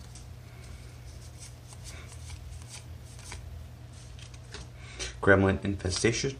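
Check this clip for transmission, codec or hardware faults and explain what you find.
Channel delay (comb filtering) from 3.78 s to the end at 6.39 s: one channel lags by roughly a single sample, about 0.02 ms, and the mono sum cancels near 20 kHz, so the audio turns slightly dull, losing its extreme top-end air.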